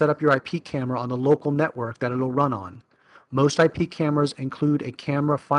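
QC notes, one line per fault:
No audible faults found in this clip.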